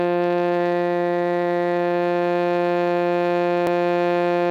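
A music clip with two faults. The converter's sampling clock wanders throughout, so each sample is taken a little early or late. The timing error is on the order of a microsecond and a half. That is sample clock jitter. Because the error scales with how fast the waveform is changing, it shows up as a faint hiss and roughness riding on the music, roughly 45 dB below it. It gets stronger on loud passages and bright, high-frequency content and disappears when the music is silent. Separately, at 3.67 s the time stamps of two adjacent stream segments overlap. The player trims what it takes to be duplicated material, but that sound was not actually repeated, so a sliver of about 18 ms is lost. This overlap between stream segments makes the waveform jump, and it is heard as a single short click or skip. The timing fits segments around 6 s long.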